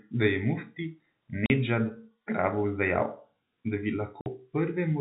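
Packet loss filled with silence cuts this speech at 1.46 s, after "da je mufti", and at 4.21 s, after "da bi": 40 ms and 50 ms hard-edged gaps, fitting lost 10 ms packets, over a narrowband G.711 telephone signal.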